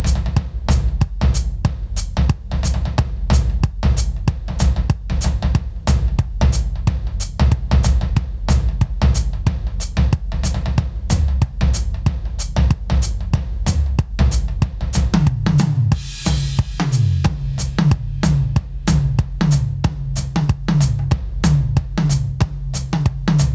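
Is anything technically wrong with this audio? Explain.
Yes, there is gain pumping throughout the music. Each loud moment pulls the overall level down, and in the quieter stretches between them the quiet parts swell back up, so the level rises and falls by around 10 dB. The likely cause is an input gain set far too high, with a fast limiter or compressor clamping it on every peak. The result sounds squashed and breathing. On the waveform, peaks sit flattened at one ceiling while the gaps bulge upward. The spectrogram shows quiet passages brightening between loud events, all of it below 8 kHz as expected from the call's microphone processing.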